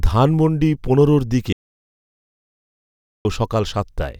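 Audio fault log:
1.53–3.25 s, audio dropout to silence: The speech cuts off abruptly and returns just as suddenly after about 1.72 s. The gap is silent. Even the room tone and background hiss vanish, so the break sounds like a hole rather than a pause. The likely cause is a lost input, such as a dropped connection or an accidental mute, while the recorder kept writing silence. Anything spoken during that stretch is gone.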